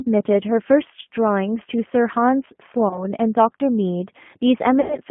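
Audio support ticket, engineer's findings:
Speech throughout: narrowband, rough and slightly synthetic, nothing above 3.4 kHz or below 150 Hz, coding damage plainly audible. Component: G.729 codec, sound fits G.729A at 8 kbit/s. Mechanism: each 10 ms frame rebuilt from a vocal tract filter, pitch predictor and a few pulses, so fine detail is lost.

2.88–3.05 s: speech smears into a short buzzy tone or coloured noise that fades, then sounds weak before recovering. Component: VoIP packet loss concealed by the speech codec. About 30 ms missing, consistent with three lost 10 ms frames. Decoder extrapolated last pitch and filter.

4.81–4.98 s: longer buzzy-tone or coloured-noise stretch, decaying and distorted into recovery. Same packet loss concealment, about 90 ms missing, fitting nine lost frames. Gain ramped down frame by frame, and frame-to-frame dependence delays clean recovery.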